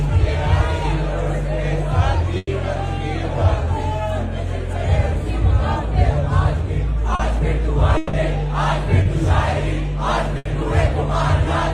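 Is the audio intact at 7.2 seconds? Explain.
No. From about 7.15 to 7.21 s there is a brief smear in the sound, where the audio seems to hold and waver before settling back. This is short concealed packet loss: about 40 ms of audio never arrived in time, so the receiver filled the gap by extending the preceding sound, either from its pitch or as shaped noise, and then crossfaded back into the real signal once packets resumed.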